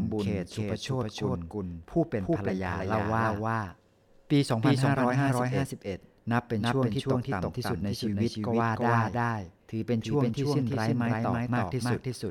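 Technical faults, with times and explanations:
Throughout, doubled audio track: every syllable of the speech is heard twice, the second copy trailing by roughly 300 ms at about the same loudness as the first. Unlike a room echo or reverb, the repeat is full-band and dry, with no decay tail, no softening and no further repeats, so it sounds like two identical recordings slightly out of step. The likely cause is the signal being captured a second time through a slower path, or an edit holding two misaligned copies.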